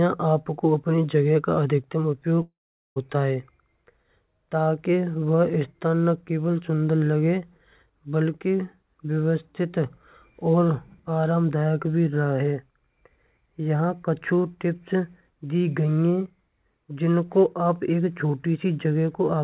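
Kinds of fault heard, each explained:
Long network dropout: At 2.42 s the speech breaks up. What's left of the last sound is stretched into a short buzz that fades away, then there's about 0.42 s of near-silence before the audio picks up again at 2.98 s, with roughly half a second simply gone. That's likely packets not arriving and the receiver papering over the gap. The narrow band above, nothing past 4 kHz, fits a G.711 call codec.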